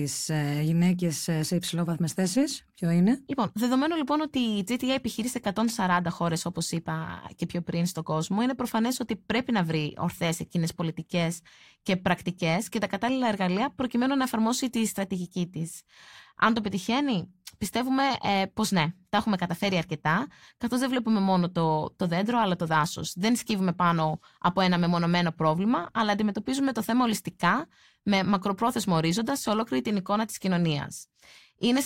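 The speech recording carries no technical faults that can be heard anywhere in it.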